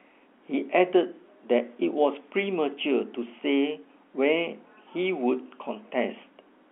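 Telephone-band speech over G.711 A-law coding, with the line band running from about 250 Hz to 3.4 kHz and no technical faults to report.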